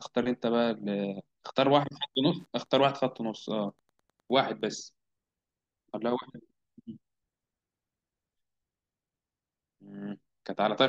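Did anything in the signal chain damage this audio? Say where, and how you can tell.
Yes. Wi-Fi interference enters at the analogue wiring stage from 1.92 s to 4.74 s, heard as a steady ticking underneath the speech, roughly ten ticks per second and sitting far below the speech level. The spacing of 102.4 ms matches a Wi-Fi beacon interval, which identifies the source. A nearby radio's pulsed transmissions are being picked up by the analogue circuitry and rectified into audible clicks that repeat with each beacon.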